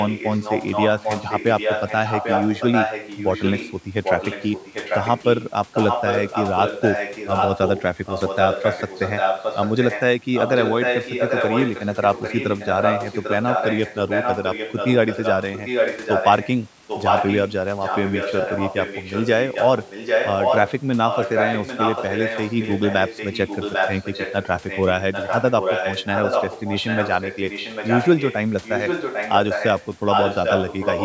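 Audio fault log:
0.0–16.51 s and 16.87–31.05 s, echo leak: a second copy of the speech trails the original by about 0.8 s (797 ms), only a little quieter, roughly 5 dB down, so the two overlap and compete. The likely cause is a far-end loudspeaker whose echo canceller let its microphone pickup return. The fixed, discrete lag sets it apart from room reverberation, which smears into a decaying tail rather than repeating the speech.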